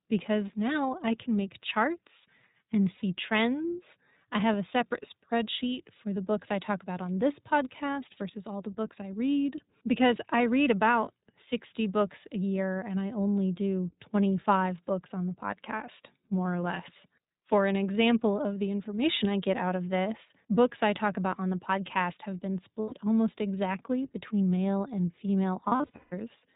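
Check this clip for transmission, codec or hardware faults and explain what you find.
Yes, there are two faults: codec coding throughout, and dropouts from lost packets.

iLBC codec, throughout: this narrowband codec codes each frame's excitation independently. The 20 ms frame timing fits its 15.2 kbps mode. Nothing above 4 kHz survives, and the speech has plainly audible roughness and a synthetic edge.

Lost iLBC frames occur at 2.96–3.02 s (60 ms), 22.80–22.94 s (120 ms), and scattered across 25.64–26.14 s (340 ms in total, the longest run around 150 ms). The decoder repeats the last pitch cycle with added noise, fading over the longer gaps, so each loss sounds like a held buzzy vowel. Because the frames stand alone, the speech recovers almost at once.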